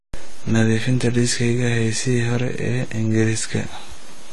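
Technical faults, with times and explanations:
Throughout, AAC compression: nothing comes through above about 11.4 kHz, and the speech sounds dull and smeared, with a fizzy, warbling edge on sibilants. That's likely a low-bitrate AAC-LC encode, around 32 kbps, starving bands of bits and cutting the top end.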